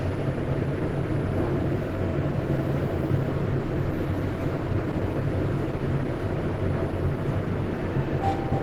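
Throughout, the sound is rough, grainy and somewhat hoarse. This is Opus compression, likely in its hybrid mode at a low rate, around 16 kbps, filling starved bands with noise. A spectrogram shows smeared, noisy texture where detail should be, with content still reaching about 20.1 kHz.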